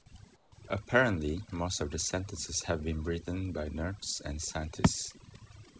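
Overdone noise removal runs through the whole speech clip. The suppressor is set too hard. It mutes single frequency bands whenever they come near its noise estimate. The background drops and breaks up into twinkling specks.

From 0.36 to 0.52 s, about 160 ms, the background changes character. The real room tone gives way to a flat, featureless hiss, about 6 dB quieter. This is likely comfort noise in place of the background, generated at the receiving end while sending paused.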